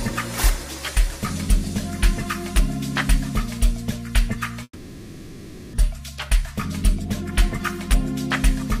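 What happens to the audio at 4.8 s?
At 4.8 s the audio is inside a call audio freeze running from 4.63 to 5.75 s. The last sound is stretched into a fading buzz or hiss for about 1.1 s, with only a brief silence of around 50 ms, likely because packets stalled and the jitter buffer ran dry. Unlike a dropout, nothing is lost: the audio resumes exactly where it stopped, so everything after it arrives about 1.1 s late.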